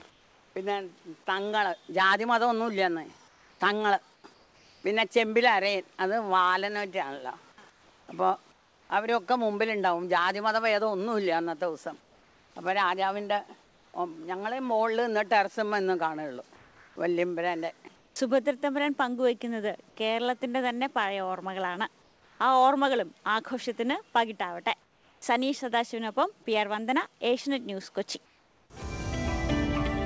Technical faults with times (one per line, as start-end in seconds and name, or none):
0.10-8.90 comfort noise in place of the background
12.00-18.16 comfort noise in place of the background
18.10-18.16 onset clipped by the voice detector
22.02-25.22 comfort noise in place of the background
28.26-28.70 comfort noise in place of the background